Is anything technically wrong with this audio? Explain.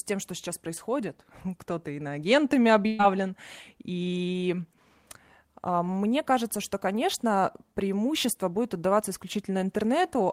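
Yes. A burst of packet loss occurs at 2.87 to 3.01 s. Several consecutive packets never arrived in time, so the receiver extended the last sound for about 114 ms while fading it, heard as a held buzz or hiss, then resumed with roughly 120 ms of speech missing.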